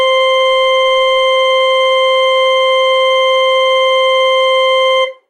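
No technical faults detected.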